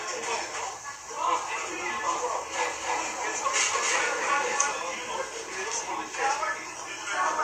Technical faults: doubled audio track

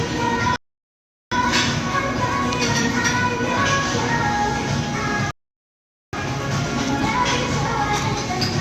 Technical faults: rebuffering stall

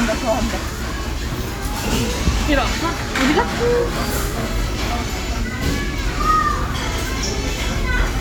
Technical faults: none

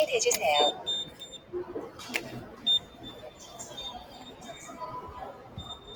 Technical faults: noise suppressor applied to music or sounds; sound cut by the noise suppressor

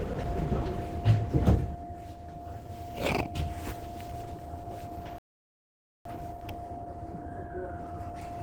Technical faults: Opus compression; playback stall

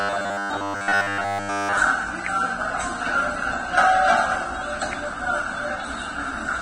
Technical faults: Vorbis compression; robotic sound from repeated short buffers

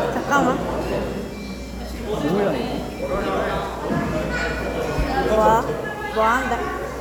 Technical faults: none

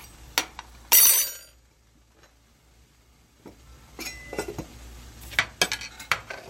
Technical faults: none

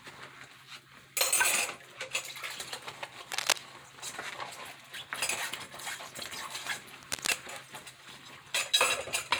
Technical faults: cable scratch noise

